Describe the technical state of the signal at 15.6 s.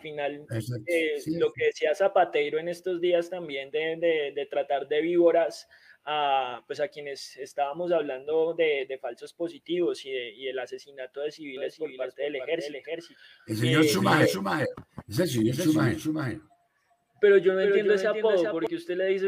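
At 15.6 s the sound carries a doubled audio track, running from 11.57 to 18.67 s. A second full-band copy trails roughly 0.4 s behind, about 5 dB quieter, with no decay or room colour, likely from an out-of-step second capture. Spectrograms show every pattern repeated, shifted right; waveforms show stacked, offset envelopes.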